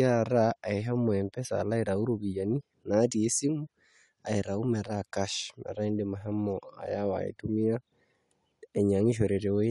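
From the first second to the end, the speech carries plainly audible codec damage, most likely Bluetooth LC3 compression. The top end has a breathy, grainy sheen where the encoder has thrown away upper-spectrum detail and patched the gaps with shaped noise. The character fits a 48 kbps stream cut into 10 ms frames, which is typical of an LE Audio link.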